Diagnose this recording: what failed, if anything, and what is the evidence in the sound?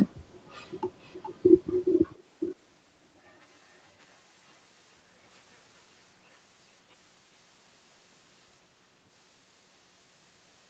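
The likely fault is an echo leak in call processing: a far-end echo canceller let loudspeaker pickup through. A delayed copy of the speech, about 0.42 s late, surfaces at 1.0–1.35 s faintly, then much louder at 1.85–2.23 s and moderately at 2.4–2.56 s.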